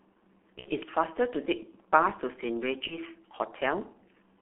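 From the start, the speech carries heavy G.723.1 codec damage. The sound is confined to a telephone band of roughly 200 Hz to 3.4 kHz, and its coarse, slowly updated voice model fits the 6.3 kbit/s mode. It sounds muffled and hoarse, with smeared consonants. On a spectrogram, energy stops sharply near 3.4 kHz and below 200 Hz, and the harmonics look blocky and steppy from one 30 ms frame to the next.

From 0.59 to 0.69 s, VoIP packet loss concealed by the speech codec appears. The gap fits two lost 30 ms frames, and the decoder repeats its last pitch and filter at falling gain, so the sound stretches and fades. A second concealment runs from 2.87 to 2.98 s and fits a single lost frame. On a spectrogram, each gap shows frozen content that dims before normal detail returns.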